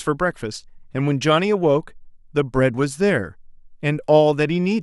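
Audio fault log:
No faults are audible anywhere in this speech recording.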